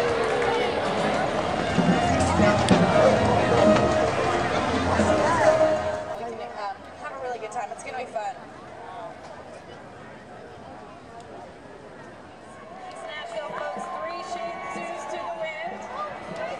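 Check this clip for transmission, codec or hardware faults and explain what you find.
One fault is audible: zipper noise from 5.46 to 6.26 s, a fast ticking under a drop of roughly 15 dB, because the gain moves in unsmoothed steps, around 40 per second.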